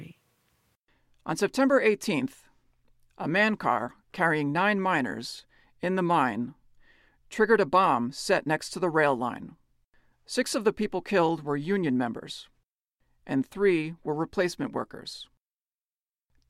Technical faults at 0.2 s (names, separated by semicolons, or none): none